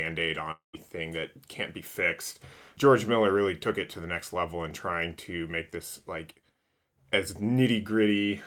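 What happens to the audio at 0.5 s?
From 0.51 to 0.75 s the speech breaks off in what is likely a long network dropout. Incoming audio stops, so the receiver stretches the last sound into a fading buzz before leaving silence. About 0.22 s of speech is lost. On a spectrogram this shows as smeared, decaying harmonics ending in a blank gap; the waveform shrinks to a flat line before the speech resumes.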